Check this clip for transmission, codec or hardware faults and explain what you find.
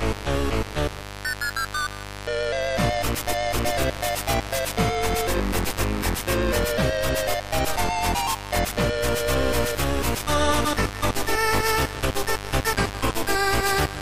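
A steady, raspy mains buzz runs through the whole clip, sitting only around 10 dB below the wanted sound. Its root is 50 Hz, with harmonics climbing into the kilohertz range, because switching spikes from a dimmer, rectifier or unshielded cable leak in twice per mains cycle.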